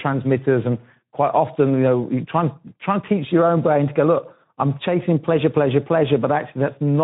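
Speech runs through the Speex codec for the whole clip, and the damage is plainly audible. The voice sounds hoarse and noisy because the CELP coder has too few bits to rebuild the excitation faithfully, which fits a low setting of around 11 kbps. Nothing survives above 3.9 kHz, so the audio is confined to a narrowband telephone-like range. On a spectrogram the energy stops at a flat ceiling near 3.9 kHz, and the harmonic striations below it look smeared and grainy.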